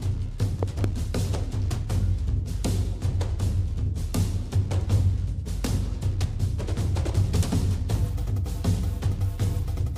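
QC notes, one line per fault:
0.63 to 0.86 s, loud pop: two sharp pops in quick succession, jumping well above the level of the sound, which keeps going underneath. Likely a sudden voltage spike from a plug, switch or static discharge getting into the chain.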